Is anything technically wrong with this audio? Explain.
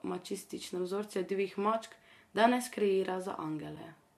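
Yes, there is one AAC frame loss with muting at about 3.76 s, near the end of the speech. The decoder stopped receiving data for a short stretch, which fits a single lost frame of about 10 ms, and it replaced that frame's spectrum with silence instead of guessing at it. The overlapping synthesis windows then fade the sound down into the gap and back up out of it, so the speech briefly dips rather than being cut off abruptly.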